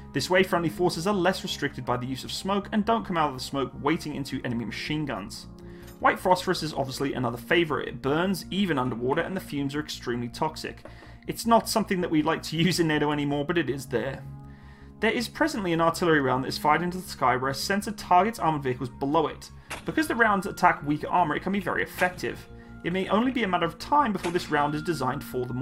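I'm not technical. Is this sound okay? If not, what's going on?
Yes, nothing sounds wrong here.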